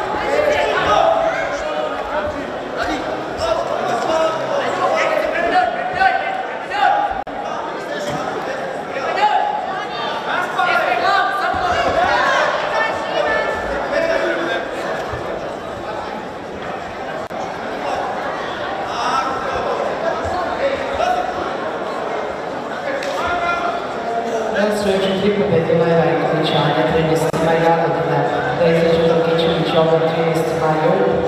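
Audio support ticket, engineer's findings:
Gap at a join of encoded pieces: short silences at 7.23 s (44 ms), 17.27 s and 27.30 s (31 ms each), every 10 s. Separately encoded segments joined untrimmed; encoder delay and end padding left in.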